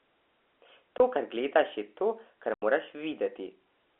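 At 0.98 s the speech drops out for 20 ms, which fits one lost 20 ms packet. Then at 2.54 s, right after "gledaš je to kar", there's a longer 80 ms hole, about four packets' worth, running to 2.62 s. That's packet loss filled with silence: the receiver just plays nothing where audio went missing, so the sound stops dead and restarts with hard edges, all over a telephone band from the G.711 coding.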